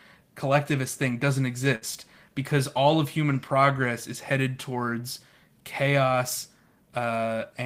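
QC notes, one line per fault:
1.75 to 1.84 s, burst of packet loss: about 60 ms of speech never arrived in time to be played, so the receiver stretched the last sound it had into the gap for roughly 60 ms, fading it down before the speech resumes later. That concealment turns a voiced sound into a held buzz, or any other sound into a fading hiss. On a spectrogram a held voiced sound shows its harmonics flattening into steady horizontal lines that dim; the waveform shows repeated, shrinking cycles, then a jump.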